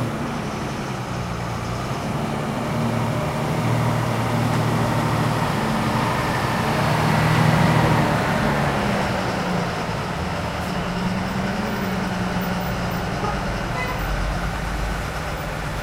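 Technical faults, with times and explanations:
Nothing stood out as a technical problem on listening to this recording.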